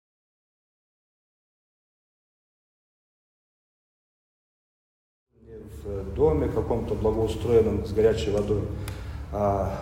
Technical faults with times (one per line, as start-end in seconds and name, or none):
none